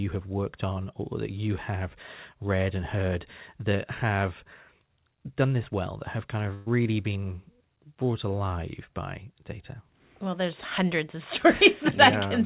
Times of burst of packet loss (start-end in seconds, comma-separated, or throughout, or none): 6.54-6.68